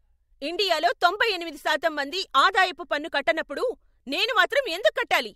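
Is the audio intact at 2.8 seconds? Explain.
Yes, at 2.8 seconds the speech plays through intact, with no audible fault at that moment.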